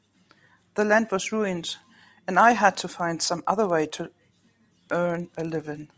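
From 2.35 s to the end at 5.97 s, a rapid, even ticking rides on the speech at 20 per second: the resampler restarted on every block. Each 50 ms chunk was converted separately, which points to a 44.1 kHz to 16 kHz conversion, so every block boundary lacks true neighbouring samples and leaves a small error. Unlike packet-loss glitches, nothing is missing and the spacing never varies, and the buzz fades whenever the speech pauses.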